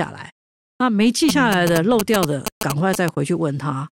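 From 1.29 to 3.09 s a galloping dit-dit-dit of short buzzes at about 217 Hz runs under the speech, roughly as loud as it. These are GSM signalling bursts: a nearby 2G phone's radio pulses, rectified by the audio circuitry into audible buzzing.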